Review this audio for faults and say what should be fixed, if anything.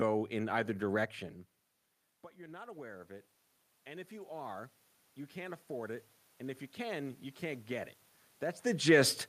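From 2.34 to 4.61 s and from 5.33 to 7.98 s, speech and room noise swell together. This is automatic gain rising: after the input dropped about 18 dB, the gain control climbed about 7 dB, then about 5 dB. Fixing the input gain would prevent it.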